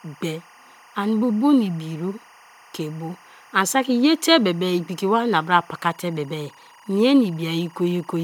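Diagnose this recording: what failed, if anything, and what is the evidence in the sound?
Timecode bleed, entering in the analogue wiring, runs through the whole speech clip as a chirping warble about 30 dB below the speech. The interference flips between pitches near 1 kHz and 2 kHz in a pattern that repeats 24 times a second, which fits linear timecode at 24 frames per second crosstalking from an adjacent track or cable. A steady interfering tone or mains hum would hold one pitch; this keeps switching between two in a regular rhythm.

Generation loss at the codec stage colours the entire recording. The speech sounds swirly, smeared and hollow, consonant onsets are blurred, and nothing appears above 20 kHz. The cause is likely repeated lossy encoding, which fits an MP3 chain at 128 kbit/s run a few times. Every re-encode quantises again on a shifted frame grid, so noise and spectral gaps build up. 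A single 128 kbit/s encode would not sound this degraded, which separates this from an ordinary low-bitrate fault.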